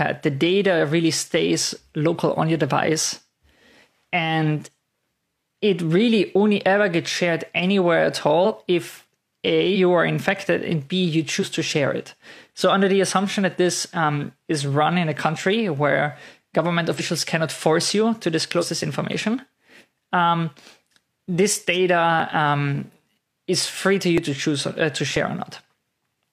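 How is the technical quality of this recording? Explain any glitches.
The recording has two distinct problems: a handful of skips in the middle of the clip and a run of regular ticks near the end.

Compressed frames skipped: at 8.41 to 8.52 s, then around 9.71, 11.38, 16.95 and 18.58 s, the audio jumps forward. Whole compressed frames never got decoded, either missing or rejected as corrupt, so playback leaps ahead by roughly a tenth of a second the first time and about half that after.

Periodic USB or driver dropouts: from 22.2 s to about 26.15 s there are around five small losses, spaced 0.99 s apart. Something in the background is stalling the USB bus or audio driver on a fixed cycle, and each time roughly ten milliseconds of audio is simply skipped. That steady spacing is the giveaway. You hear it as evenly timed ticks or pops riding on the signal.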